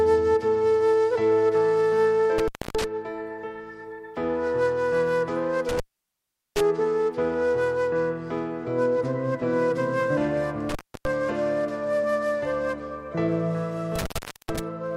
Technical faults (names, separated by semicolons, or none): intermittent contact